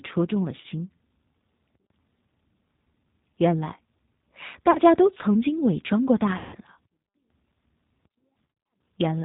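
Speech that sounds narrow, slightly rough and synthetic throughout, with nothing above 4 kHz and a plainly audible grainy texture. That is the G.729 codec, whose character fits the 8 kbit/s G.729A variant: it rebuilds each 10 ms frame from a vocal tract filter, a pitch predictor and a handful of pulses rather than the actual waveform. Four brief disturbances interrupt the speech, each stretched into a buzzy tone or coloured noise that fades rather than a clean gap. They fall at 0.61 to 0.66 s, 4.71 to 4.79 s, 6.38 to 6.55 s (about 150 ms), and around 8.47 to 8.50 s, where short dropouts recur across roughly a quarter of a second. This is VoIP packet loss concealed by the speech codec. When packets go missing, the decoder repeats its last pitch and filter with shrinking gain, and because each frame builds on the previous one, the sound stays weak or distorted briefly after packets resume.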